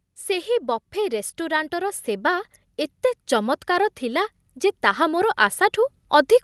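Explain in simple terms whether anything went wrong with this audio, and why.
Automatic gain rising is audible from 0.26 s to the end. The volume control judged the input too quiet and kept turning it up gradually, so the speech and background noise swell louder together instead of staying at a steady level.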